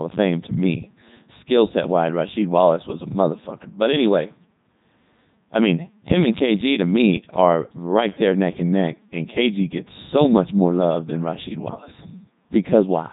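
From start to finish, the speech passes through a Codec 2 vocoder. The decoder rebuilds the voice from sine waves, so the original waveform is gone. It sounds robotic and buzzy, with heavy damage. Nothing is present above 3.8 kHz, which fits the 3.2 kbit/s mode.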